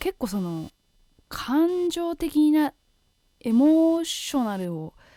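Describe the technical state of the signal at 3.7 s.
Hard clipping spans 3.64 to 3.73 s. Peaks exceed a stage's limit by about 1 dB and are cut flat, adding brief high harmonic crackle. Computer activity noise is also present throughout: load changes in the computer disturb the audio ground, giving a buzz pulsing at around 300 Hz, well below the speech level.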